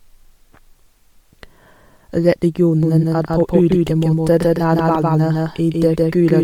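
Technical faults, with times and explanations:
Throughout: Bluetooth LC3 compression. The speech has a plainly audible breathy, grainy edge in the upper range, where detail has been thinned and replaced by noise-like fill. That points likely to the LC3 codec at a moderate rate, which fits 48 kbps with 10 ms frames. Unlike band-limiting alone, the top end is still there but sounds granular.
2.83 s to end: doubled audio track. From 2.83 s a second full-band copy of the speech runs about 150 ms behind the first, at roughly the same level, and continues to the end. It likely comes from a second capture path or misaligned edit. Unlike room echo, it starts abruptly and has no decay or reverberant colour.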